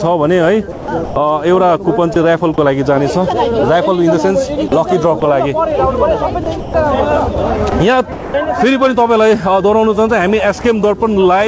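Five stretches show sound chopped by the voice detector: 0.72–1.16 s, 2.14–2.58 s, 4.68–5.22 s, 6.44–6.74 s and 7.70–8.34 s. Within each, 280, 60, 60, 160 and 240 ms respectively are replaced by synthetic background, likely from the sender's detector switching transmission off and on. The result is audible holes filled with comfort noise.

At 10.62–10.64 s, sound dropped by the voice detector leaves a 20 ms gap filled with comfort noise before the sound returns. The detector likely classed that moment as background and briefly stopped sending. Throughout, the G.722 call path carries nothing above 8 kHz.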